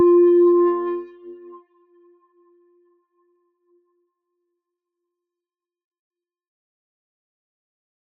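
From the start of the clip to its end, a noise suppressor applied to music or sounds is acting on the whole signal. The processor, tuned for speech, treats sustained tones, room ambience and reverberant decay as unwanted noise and pulls them down. Transients pass largely intact, but anything held afterwards is attenuated, with gain swings of around 20 dB. The result is a pumping, fluttering level and a thin, dry, hollowed-out character between attacks.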